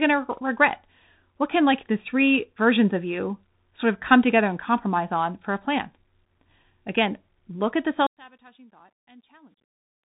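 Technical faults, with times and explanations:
Throughout: Bluetooth CVSD headset codec. Nothing passes above about 3.8 kHz, and the sibilants sound scratchy over a grainy hiss as the one-bit delta steps fail to track fast, loud movement. This fits a 64 kbps CVSD link. A spectrogram shows a hard ceiling near 3.8 kHz with speckled noise below it.
8.07–10.16 s: one channel inverted. Right after "look at the", the level falls by about 30 dB to a faint residue, most likely because one channel's polarity is reversed and the shared centre cancels when summed to mono. The waveform collapses abruptly, and the spectrogram dims across all bands.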